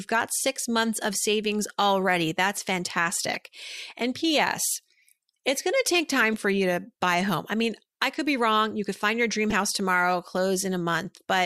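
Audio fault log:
3.33–3.39 s, corrupt frame decoded: a sharp blip just before "and ps", peaking around -15 dBFS across a handful of frames. Damaged bits got decoded anyway, so energy lands at the wrong frequencies.
6.33 s, corrupt frame decoded: a quicker, quieter squeak, around -25 dBFS, between "going to take time" and "for you to buy". Only a couple of frames were hit.
9.50–9.54 s, corrupt frame decoded: another chirp around -15 dBFS between "could find your dream" and "house tomorrow", lasting about as long as the few bad frames.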